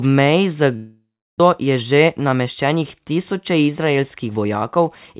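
From 0.76 to 1.42 s, a likely long network dropout: packets stopped arriving, so the receiver stretched the last sound into a fading buzz or hiss, then near-silence, and resumed with material missing. From 1.60 to 4.45 s, a jitter buffer speed-up trims pitch-period slices to shed about a fifth of a second of built-up delay, so the speech runs hurried at roughly 107% while keeping its pitch, through telephone-band audio with nothing above 4 kHz.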